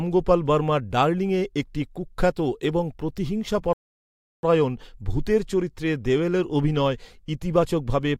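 At 3.73 s the speech halts and the line goes fully silent until 4.43 s, a rebuffering stall lasting about 0.7 s. Playback ran through its downloaded audio and had to wait for more data before continuing. What sets this apart from a dropout or packet loss is the restart: the speech picks up at the exact point it broke off, with nothing skipped, so the clip loses no content and simply runs 0.7 s longer.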